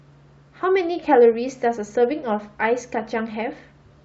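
Throughout, the speech has a breathy, grainy top end, likely from Bluetooth LC3 compression: upper bands are partly zeroed and noise-filled, showing as speckled high-frequency texture on a spectrogram. At 1.03 s a lost LE Audio frame leaves a 7.5 ms noisy smear where the decoder repeated the previous spectrum, visible as a brief diffuse vertical band.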